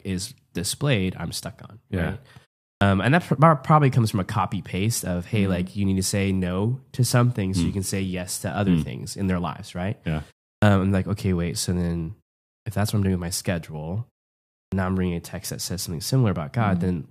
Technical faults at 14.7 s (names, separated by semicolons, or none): clipped start after a pause